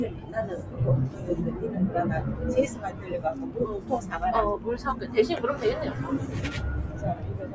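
A recording of everyday sounds, passed through call microphone processing that leaves nothing above 8 kHz, has a speech-tuned noise suppressor applied to music or sounds throughout. It treats sustained sound as noise, so level swings by around 10 dB, giving a pumping, thinning texture. A waveform would show an uneven, breathing envelope, and a spectrogram would show blotchy, patchy energy. The sound is also cut by the noise suppressor at 0.1–0.35 s (about 7 dB down), 1.1–1.26 s and 2.7–3.08 s (each about 6 dB). Steady or decaying parts sink while onsets survive, appearing as sudden dips in the waveform and faded, truncated tails on the spectrogram.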